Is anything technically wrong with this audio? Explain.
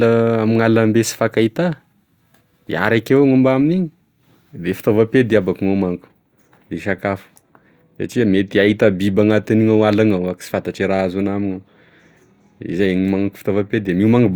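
No, the speech signal shows no audible technical faults at any point.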